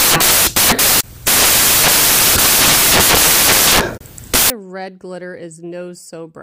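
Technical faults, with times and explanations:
0.00–4.50 s, samples built from the wrong bytes: misassembled bytes promote the fast-changing low bits, giving loud, harsh broadband noise, unlike steady added hiss.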